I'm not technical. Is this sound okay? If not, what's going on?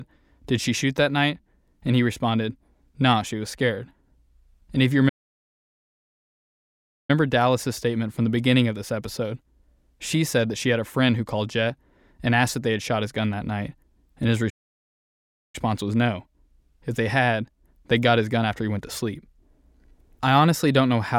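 No. The speech cuts out into silence twice, for about 2 seconds from 5.08 s and about 1 second from 14.49 s, then carries on. These are playback stalls, likely the player running short of data or getting held up, so it went quiet until it caught up.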